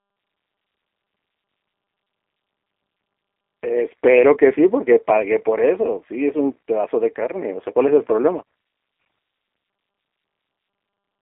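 Throughout, the speech sounds rough, slightly synthetic and band-limited, with nothing above 3.7 kHz. This is G.729 codec damage: the speech is rebuilt from a pitch predictor and sparse pulses.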